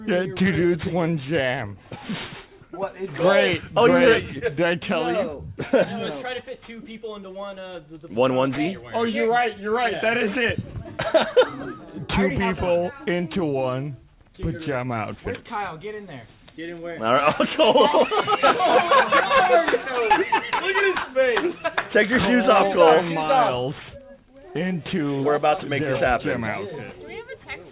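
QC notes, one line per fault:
Throughout: aliasing. High content sounds gritty and metallic, with energy running hard up to 4 kHz. The rate was lowered without anti-alias filtering, which fits a drop from 48 kHz to 8 kHz, so everything above 4 kHz folds back as wrong pitches roughly 20 dB below the signal.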